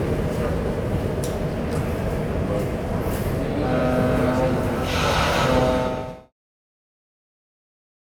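No technical faults can be heard in this audio. Around five and a half seconds in, the level begins a smooth fade out that reaches silence at 6.33 s, with no click or hard edge.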